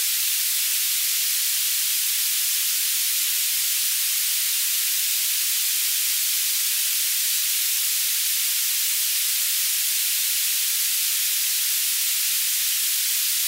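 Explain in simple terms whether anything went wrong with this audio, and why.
At 10.19 s, a quarter-second of sound plays twice. That's overlapping chunks: a new 4-second chunk began before the previous one ended. Unlike a dropout, nothing is lost.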